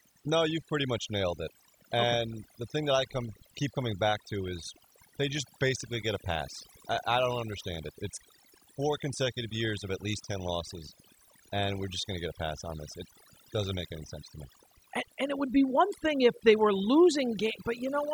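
Throughout the recording, the background drops to near silence scattered with twinkling specks. This is overdone noise removal: the reduction was set so strong that bands near the noise estimate were pulled right down, taking quieter voice detail with them.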